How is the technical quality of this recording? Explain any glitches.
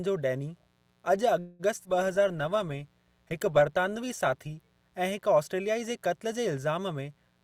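The recording has several faults. A steady hum runs underneath, and a cluster of network glitches occurs between about 1.4 and 4.7 seconds.

Mains buzz: A raspy 60 Hz buzz with harmonics runs through the whole clip, sitting roughly 40 dB below the speech. It is typical of switching spikes from a dimmer, a rectifier or poor shielding.

Call audio freeze: From 1.39 to 1.62 s the sound stalls into a fading buzz for about 200 ms, then resumes where it stopped. Nothing is lost. The likely cause is delayed packets draining the jitter buffer.

Skip ahead: At 1.83 to 1.88 s playback jumps forward, dropping roughly 70 ms of speech. The two sides are spliced almost directly, with only a tiny bridging fill.

Call bitrate drop: From 1.84 s until just before "ऐं हिक ऑस्ट्रेलियाई" at 4.65 s, the speech turns coarse and muffled, with the top end cut. This fits the encoder being pushed from about 64 down to 22 kbps.

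Jitter buffer slow-down: Between 2.19 and 2.57 s the receiver repeated pitch periods to rebuild its reserve. This adds 44 ms, so speech runs at 90% speed at unchanged pitch and sounds slightly drawn out.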